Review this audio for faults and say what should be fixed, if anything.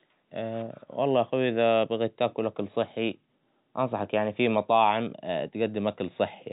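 Nothing here needs fixing as far as I can hear; the speech simply carries the familiar narrowband sound of G.711 telephone coding, with nothing above about 3.8 kHz, just as that format delivers it.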